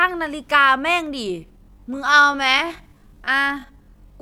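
From 1.22 s to the end, the speech falls into a time-stretched section. The pace drops abruptly to about 0.58 times normal speed while the pitch stays put, likely because software lengthened the passage by repeating short slices of sound. It sounds drawn out and dragging. On a spectrogram, the harmonics keep their spacing but stretch sideways, and the waveform shows elongated envelopes.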